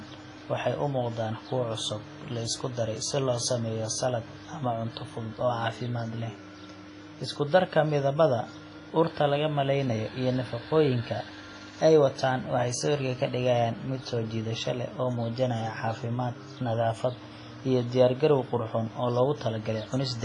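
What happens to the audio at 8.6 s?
At 8.6 s the speech sits under the same coding damage that runs through the whole clip, most likely WMA compression. Nothing comes through above about 10.3 kHz, and the heavy smearing fits a starved bitrate around 24 kbps. The long transform blocks spread quantisation noise over tens of milliseconds around each sound, and weak detail gets zeroed out, so you hear a ringing, washy quality with hiss that swells and fades along with the voice.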